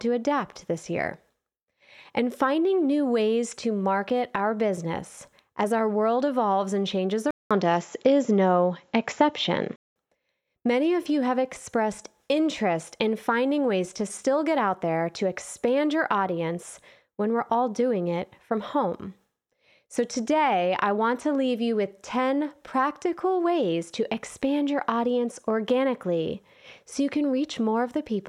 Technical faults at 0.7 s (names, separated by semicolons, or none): none